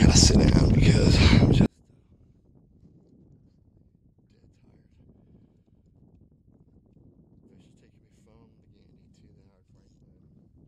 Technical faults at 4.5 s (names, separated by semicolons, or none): one channel inverted